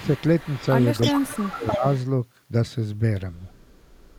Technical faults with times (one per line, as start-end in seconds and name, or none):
0.00-0.08 speech suppressed in double talk
0.00-2.02 echo leak
1.08-1.84 speech suppressed in double talk
3.55-4.19 echo leak